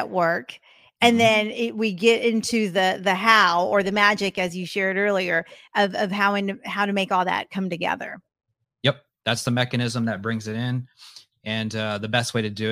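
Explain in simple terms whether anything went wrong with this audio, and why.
Nothing went wrong here.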